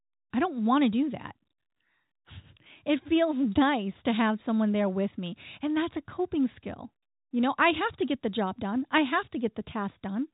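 Nothing goes wrong anywhere in this speech clip; it's simply narrowband G.711 telephone coding doing its usual job, with the band topping out around 3.8 kHz.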